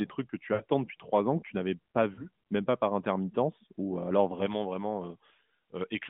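Lost AMR speech frames at 0.54 s, after "trucs que tu", and at 2.14 s, after "que tu n'avais pas". The decoder stretched the last good frame and faded it, giving a smeared dip of about 60 ms and then 40 ms, which fits three and then two dropped frames.

Pre-emphasis left on from 4.46 s, after "intermittence ou euh alors", to the end. The treble boost was never undone, leaving highs about 11 dB too strong at 10 kHz relative to 1 kHz, so the sound turns thin and hissy.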